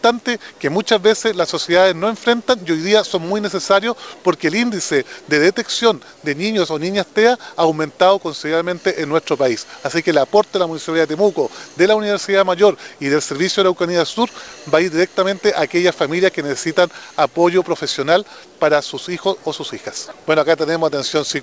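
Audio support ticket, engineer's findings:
No faults found; the signal shows the expected call-path character, with nothing above 8 kHz and a band-limited coding texture consistent with G.722 at 64 kbps.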